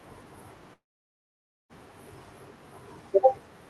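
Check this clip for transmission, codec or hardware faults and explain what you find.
One transmission fault is audible in the speech, carried over an Opus call path whose audio tops out around 12 kHz.

From 0.73 s to 1.72 s there is a long network dropout, most likely a run of lost packets. About 0.96 s of audio never arrives. The receiver's concealment briefly extends the last sound as a fading buzz, then gives up, leaving roughly 0.9 s of near silence. The speech resumes at 1.72 s with the missing portion simply gone rather than delayed.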